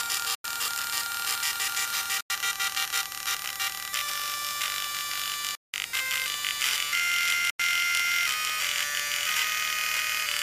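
Corrupt frames were muted four times: damaged compressed frames were rejected by the decoder, and the player substituted silence for them while holding the timeline in place. The audio drops abruptly to nothing from 0.35 to 0.53 s, 2.21 to 2.30 s, 5.47 to 5.74 s and 7.50 to 7.60 s. The holes last roughly 0.09 to 0.27 s, each the length of whole frames, and the sound resumes on time after each one.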